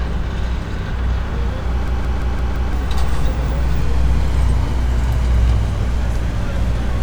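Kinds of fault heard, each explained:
System hang loop: the system or audio driver stalled while the sound hardware kept replaying the same ring buffer. From 1.88 to 2.73 s, a 0.17 s piece of sound repeats exactly five times at about 5.9 per second, which fits an 8192-sample buffer. With a loop that long, it comes across as a stuttering, machine-gun judder, and roughly a second of the real audio never plays.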